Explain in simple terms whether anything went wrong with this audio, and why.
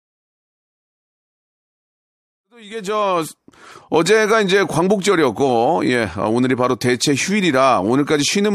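Nothing went wrong here; the audio simply fades in.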